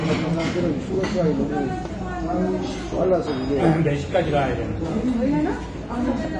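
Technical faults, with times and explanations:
Throughout, AAC compression: nothing comes through above about 9.8 kHz, so the whole clip sounds dull and a bit muffled, and there's obvious smearing with a warbly, fizzy edge on anything sustained or hissy. That's likely an AAC-LC encode squeezed hard, which fits something around 32 kbps. At that rate the encoder drops the top band entirely and spreads too few bits across what's left, so detail blurs and the coarse quantisation comes through as that watery texture.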